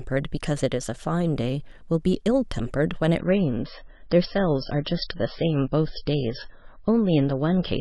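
At 3.19 s the adaptive stream switched to a lower bitrate, most likely because the connection slowed, and it stays there to the end. The speech shifts from full-band sound to a dull, band-limited version with nothing above 5.6 kHz. The quality change is abrupt, with no gap, and the degradation points to MP3 falling from around 128 kbit/s to roughly 19 kbit/s.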